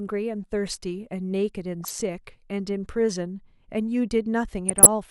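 Bit errors from weak reception slip past error correction into the MP2 data, corrupting samples and scale factors. The result is DAB burbling over the speech, from 1.81 to 2.02 s and again from 4.69 to 4.87 s: individual sub-bands jump in level frame by frame, giving short blips of noise in single sub-bands.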